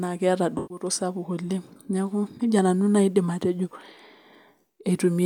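AAC frame loss with concealment at 0.57 to 0.84 s in this speech leaves a smeared, phasey patch before "sapuk oleng neeku nejia", as the decoder rebuilt about 128 ms, roughly three frames, from the last good spectrum.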